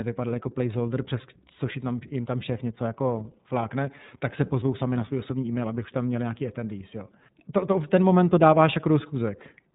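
A speech recording that's been run through the iLBC codec for its whole length, and you can hear it plainly. Everything above about 3.8 kHz is gone, so it has that boxed-in narrowband phone quality, and the speech comes out slightly rough and synthetic. That grain fits iLBC coding each 30 ms frame's excitation on its own, without borrowing from the frame before. The amount of damage fits the 13.33 kbps mode.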